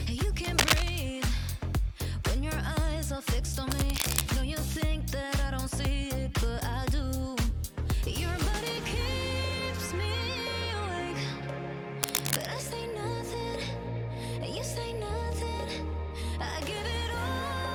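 Cable scratch noise appears from 0.44 to 0.90 s, a little louder than the sound, then at 3.70 to 4.24 s and 12.03 to 12.57 s at roughly equal level. Each is a half-second burst of dense, uneven rustling, likely from a worn connector being moved. Unlike isolated digital clicks, it scrapes continuously.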